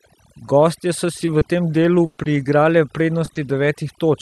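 From start to finish the speech carries the marks of overdone noise removal. The suppressor was pushed so hard that individual frequency bands near its noise estimate were cut almost to nothing, and the softer parts of the voice went with them. The background drops away, dotted with twinkling specks. Unlike a plain low-pass or a codec bandwidth limit, the loss flickers band by band rather than sitting at a fixed edge.

Between 1.17 and 3.67 s, repeated packet loss gives the speech a choppy, robotic quality. Six separate holes open in that span. Each is papered over by stretching the preceding sound, and about 220 ms is lost in all, with the longest single gap near 120 ms. What separates this from one isolated dropout or a single clean click is the rapid recurrence. The patches add up to around 0.4 s of rebuilt audio, so the stutter keeps returning before the ear can settle. The call path itself sounds like Opus with the top end stopping near 12 kHz, which fits a rate around 48 kbps.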